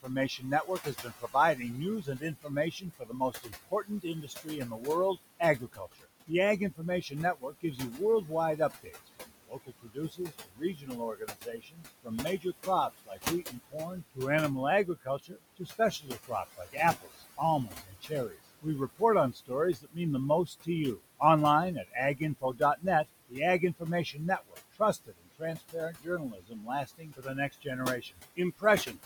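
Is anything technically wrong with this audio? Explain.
Yes. The speech has two faults. Noise suppressor artifacts run throughout. A suppressor pulls background noise down by about 18 dB, leaving a fluttery, watery residue that pumps between phrases. The room noise sits about 13 dB below the speech.

Speech is also cut by the noise suppressor, from 0.02 to 14.19 s, 14.85 to 19.02 s, 19.33 to 19.98 s, 20.46 to 21.21 s, and 21.75 to 29.0 s. It mistakes soft speech for noise and turns it down by up to about 22 dB. Consonants and word endings sound swallowed, for roughly seven seconds in the first span and a few seconds later.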